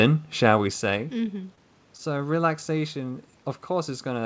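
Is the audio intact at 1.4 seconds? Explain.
No, scattered short gaps run from 0.98 to 2.01 s, after "shall we". About seven lost packets, each concealed by extending the preceding sound, leave brief ticks and smears.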